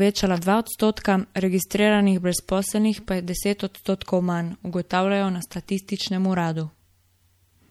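From start to finish the speech carries plainly audible MP3 compression damage, most likely from encoding at a low bitrate, which fits something near 64 kbps. Starved of bits, the encoder discards weak frequency lines, so the voice sounds watery and swirly, with metallic chirps on s sounds and softened consonant attacks. A spectrogram would show speckled holes flickering between frames.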